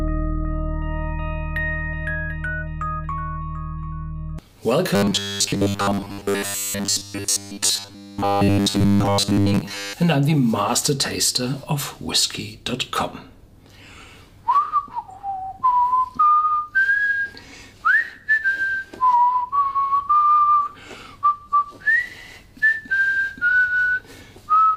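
From 4.95 to 9.93 s the sound turns into robotic sound from repeated short buffers: a rigid, metallic buzz at 100 Hz that still loosely tracks the original contour. The likely cause is new audio arriving too seldom, so a 10 ms chunk is replayed over and over, filling most of that stretch while real audio is skipped. Unlike plain dropouts or stutter, there are no gaps; the steady 100 Hz pitch gives it away.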